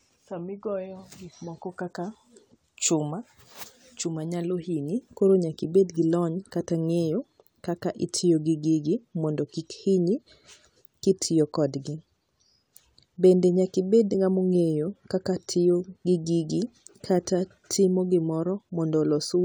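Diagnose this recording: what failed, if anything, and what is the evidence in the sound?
Listening through the recording, nothing in the speech stood out as a failure at any stage of the chain.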